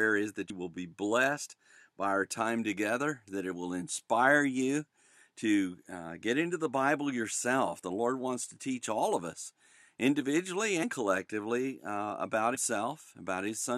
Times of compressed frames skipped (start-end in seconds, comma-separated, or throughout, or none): 0.49, 10.82, 12.54-12.56